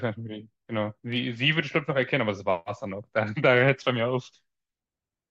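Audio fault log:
No faults detected.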